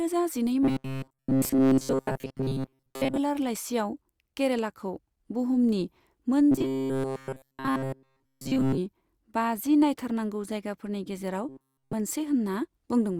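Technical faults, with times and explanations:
0.63–3.17 s, 6.51–8.78 s and 11.49–11.93 s, robotic sound from repeated short buffers: the speech goes to a stiff metallic buzz locked at 133 Hz, most of the first stretch and all of the later two. That's likely a roughly 7.5 ms chunk being looped while fresh audio runs late.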